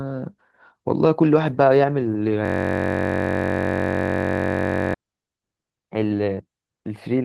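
A speech clip with a system hang loop from 2.45 s to 4.94 s. For about 2.5 seconds the output stops advancing, and the same 21.33 ms slice of audio replays back to back well over a hundred times. That repetition at 46.9 Hz fuses into a steady low buzz. The host or driver stalled while the audio hardware kept cycling its ring buffer, and the loop length fits a 1024-sample buffer.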